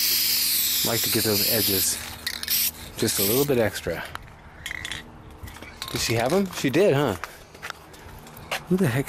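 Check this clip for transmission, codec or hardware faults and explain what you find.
One codec fault runs through the whole clip. Throughout, the sound is dull and carries a gurgling, granular distortion, with upper frequencies flickering in and out. The likely cause is MP2 compression at a low bitrate, around 80 kbps: starved sub-bands switch off and the rest are coarsely quantised. Unlike a steady low-pass filter, the top end fluctuates rather than staying cleanly cut.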